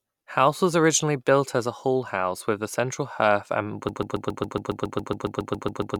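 A speech clip that falls into a broken-record loop at 3.89 s: a 0.14 s fragment repeats exactly, back to back, about 15 times until the end, likely from a stalled player or stream. Unlike an echo, the repeats never fade or overlap.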